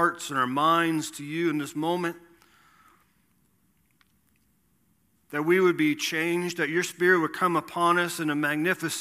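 A speech clip with no technical faults heard.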